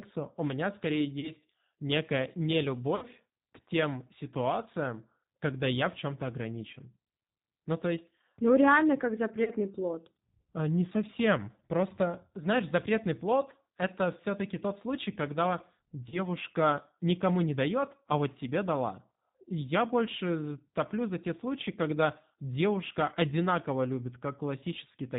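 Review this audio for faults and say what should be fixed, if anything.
The whole recording carries plainly audible G.729 codec damage. The speech is intelligible but rough and slightly synthetic, as if rebuilt from a vocal tract filter, a pitch predictor and a few pulses per short frame, which fits an 8 kbit/s G.729A stream. On a spectrogram, energy stops at a hard ceiling of 4 kHz with nothing above it. Fine harmonic detail looks grainy and blotchy rather than smooth. Sending the call over a wideband codec such as G.722 or Opus would prevent this.

There are four moments of VoIP packet loss concealed by the speech codec. The first is at 1.20–1.32 s, right after "меня скорее", and about 30 ms of audio is missing. The second is at 2.96–3.06 s, where about 60 ms is gone, which points to two consecutive packets. The third is at 9.44–9.51 s, after "реально как". The fourth is at 16.09–16.19 s, after "тот случай когда". 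The last two each lose about 30 ms. In each gap the decoder keeps repeating its last pitch and filter state at falling gain, so the sound smears into a buzzy tone or a coloured noise that fades. Because each frame builds on the previous one, the voice stays weak or distorted for tens of milliseconds or more after real packets resume. On a spectrogram each gap shows a frozen, horizontally stretched patch that dims. The waveform shows a decaying stretch before normal speech returns. A jitter buffer with forward error correction or redundancy, on a network path with less loss, would prevent these dropouts.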